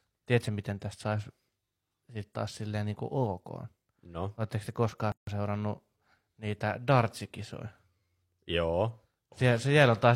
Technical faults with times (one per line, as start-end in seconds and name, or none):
5.12-5.27 gap at a join of encoded pieces